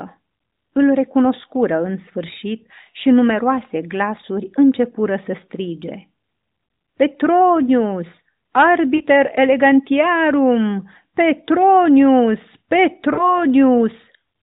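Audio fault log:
8.96–9.02 s and 13.14–13.36 s, lost AMR speech frames: about 40 ms of speech fails the radio checksum at each point, so the decoder repeats the last good pitch and vocal tract settings at falling gain. This is heard as a brief smeared warble, with a longer fade at 13.14 s. On a spectrogram, harmonics flatten and dim; the waveform shows a shrinking, repetitive envelope, all below the 4 kHz narrowband ceiling.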